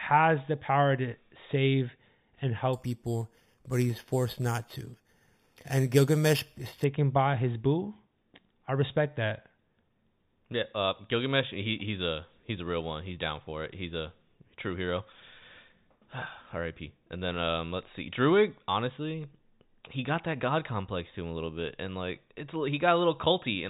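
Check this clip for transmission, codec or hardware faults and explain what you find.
One fault is present. Between 2.73 and 6.84 s, after "power to save and" and before "by his boo", the speech shows imaging from sample-and-hold upsampling, consistent with an 8 kHz source repeated up to 44.1 kHz without smoothing. The mirrored spectrum from 4 to 8 kHz is a metallic fizz about 18 dB below the speech.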